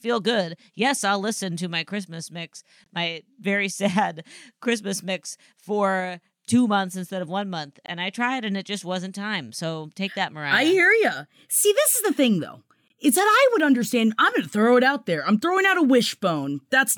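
Three short holes cut into the speech. The first runs from 2.84 to 2.86 s, just before "my very". The second runs from 7.86 to 7.88 s, right after "instead of one month". The third runs from 12.88 to 12.90 s, after "is the thing though". Each is a gap between chunks. The audio was split into 5 s pieces, and 20 ms of silence sits at each join. Nothing is lost. The flow just breaks at each join.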